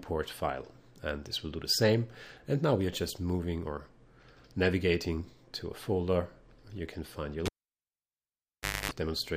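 A live cable is pulled out and plugged back in at 7.46 s. The first pop comes as the contact breaks, and the signal then drops to near silence for about 1.41 s. While the plug goes back in, only the tip touches at first. The unshielded connection picks up a 50 Hz mains buzz lasting about 0.26 s. A second pop follows as full contact returns and the sound comes back, ending the fault at 8.92 s.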